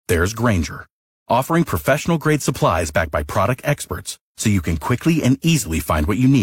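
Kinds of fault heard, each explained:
No technical fault can be heard in this speech recording. There is nothing to list under any kind.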